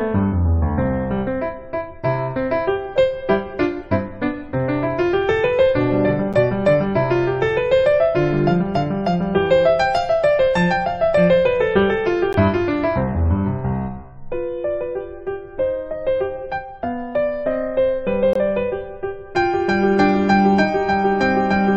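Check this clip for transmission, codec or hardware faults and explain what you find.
Three short dropouts are audible, all the same fault: a gap between stream segments. They fall at 6.33 s, 12.33 s and 18.33 to 18.35 s, spaced about 6 s apart, which fits 6-second segments. At each boundary the time stamps of adjacent segments don't quite meet. The player pads the hole with silence, adding 8.7 ms, 14.4 ms and 21.8 ms. Each one is a hard-edged blink of silence. Nothing is lost. The sound simply resumes slightly late.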